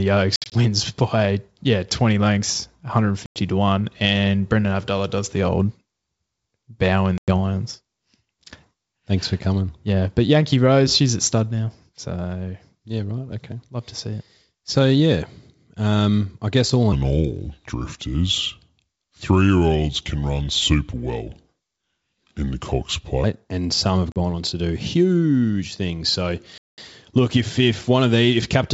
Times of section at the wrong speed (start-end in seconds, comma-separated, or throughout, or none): 16.92-23.24